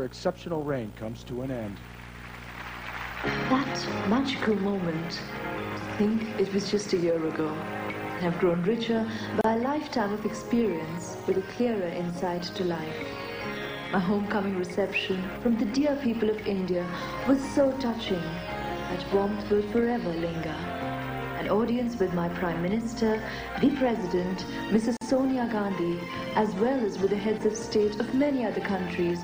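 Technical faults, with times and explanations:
9.41–9.44 s and 24.97–25.01 s, gap at a join of encoded pieces: silences of 32 ms and about 45 ms break continuous sound where separately encoded segments were spliced with their start delay and end padding left untrimmed. On the waveform and spectrogram each shows as a narrow empty vertical band with slightly blurred edges, after which the sound resumes where it stopped.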